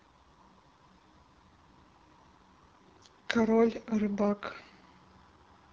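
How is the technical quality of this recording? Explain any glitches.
The speech sounds rough and raspy throughout, with a buzzy, gritty edge and no content above about 7.3 kHz. That is the AMR wideband (HD Voice) codec running at a low rate, consistent with 8.85 kbit/s, where its pulse-driven vocal tract model is too coarse to render voiced sound cleanly.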